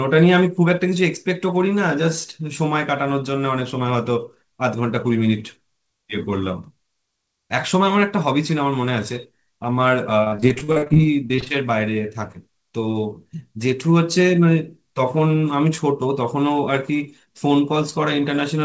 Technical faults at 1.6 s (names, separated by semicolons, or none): none